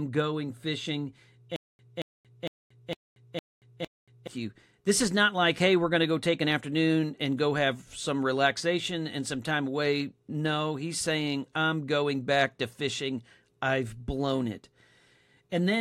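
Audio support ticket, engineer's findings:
Stutter with silent gaps, 1.56–4.27 s: one 227 ms burst repeats six times, each followed by 230 ms of digital silence, every 457 ms. Likely stream/player stall, replaying the last buffered fragment per retry, then running dry. Intervening speech lost.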